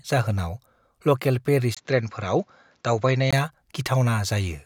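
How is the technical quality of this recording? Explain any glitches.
The recording has one glitch. From 1.75 to 3.33 s, likely an input switched to a poorer device: a 20 ms gap, then dull sound with nothing above 7.6 kHz and a faint new noise floor. The spectrogram shows a sharp ceiling; the waveform shows a brief gap at 1.75 s.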